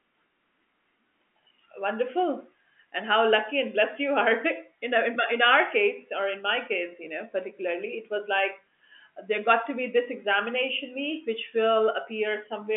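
Telephone speech with no audible technical faults.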